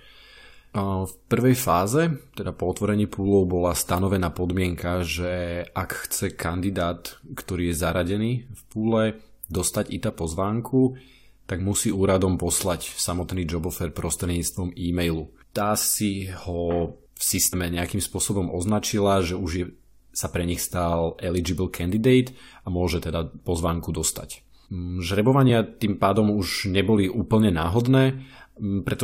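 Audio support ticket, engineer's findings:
Jump forward in speech at 17.52 s, before "nejakým spôsobom označila že", losing about 100 ms (around five frames), and at 25.48 s, before "tým pádom už neboli", losing about one frame. Compressed frames skipped: the decoder drops whole 23.2 ms frames, which are missing or rejected as damaged.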